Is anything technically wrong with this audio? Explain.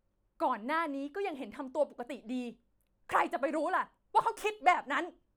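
No, nothing technically wrong can be heard here.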